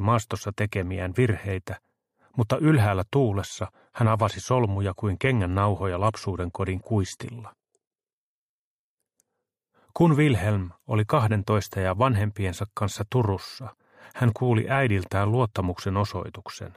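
From 3.47 to 9.47 s, an adaptive stream at a lower bitrate abruptly dulls the treble with no gap; the spectrogram shows a flat cutoff at 11.8 kHz.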